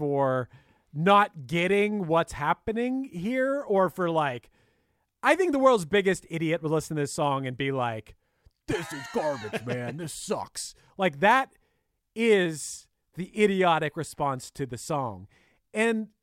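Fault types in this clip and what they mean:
No fault types are present in this clip.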